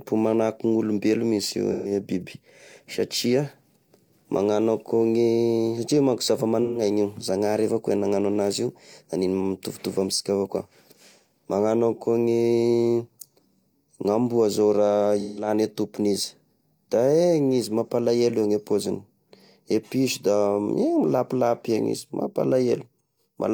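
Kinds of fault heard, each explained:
AAC frame loss with concealment: lost frames get patched from the last good spectrum, leaving short smeared, phasey blurs at 1.71, 6.62 and 15.2 s.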